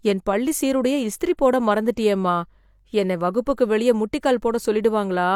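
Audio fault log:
3.56 s, pre-echo: a brief hiss of about 12 ms creeps in just ahead of a sharp speech attack, which lands softened and smeared. The codec spread its quantisation noise across the whole transform block, so noise sized for the loud onset also filled the quiet gap before it.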